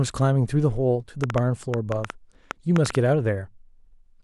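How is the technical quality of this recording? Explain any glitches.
One fault: from 1.24 to 2.96 s, a train of clicks, likely interference or a faulty connection or power supply injecting pulses, puts about ten uneven ticks over the speech, roughly 15 dB above it, around 6.4 per second.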